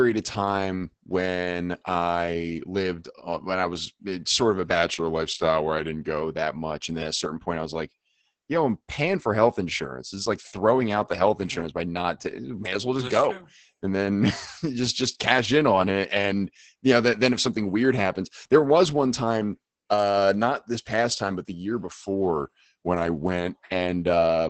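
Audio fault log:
throughout: Opus voice compression. The speech sounds muffled, hoarse and faintly robotic, and nothing remains above about 8.5 kHz. The audio points to Opus's SILK speech coder running at a very low rate, around 10 kbps, with the excitation coded coarsely. Unlike a plain low-pass filter, which would only dull the top end, the rough, synthetic grain in the voice itself reveals a model-based speech codec.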